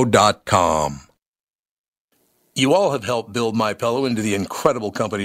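No audible technical faults.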